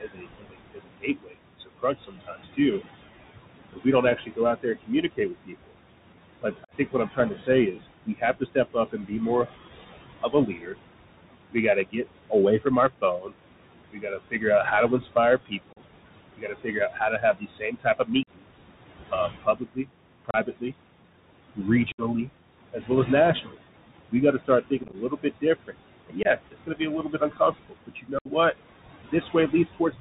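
From start to finish there's a noise suppressor at work, pulling the background down by about 21 dB between phrases and letting it swell back under the talking. What's left of the room noise sits about 11 dB below the speech.

Running alongside that is the Bluetooth CVSD headset codec, and its damage is plainly audible. Nothing gets through above 4 kHz, s sounds turn scratchy, loud bright moments distort because the one-bit-per-sample step can't keep up, and there's a granular hiss underneath, all of which fits a 64 kbps CVSD link.

The suppressor also eats into the speech itself. It's doing this from 0 to 2.58 s and again from 3.73 s to 30.0 s, mistaking soft consonants, word endings and quiet stretches for noise and dipping them by up to about 22 dB. That amounts to roughly a second and a half in the first stretch and around seven seconds in the second, where things sound swallowed or faint.

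Then there's unconcealed Bluetooth headset packet loss, where dropped voice packets were replaced by silence or an idle pattern. These show up as abrupt holes, with the sound coming back quieter for a moment:
6.65 s, about 41 ms
15.73 s, about 38 ms
18.23 s, about 45 ms
20.31 s, about 34 ms
21.92 s, about 64 ms
24.83 to 24.95 s, about 45 ms scattered as crackle, with no single gap over 11 ms
26.23 s, about 23 ms
28.19 s, about 68 ms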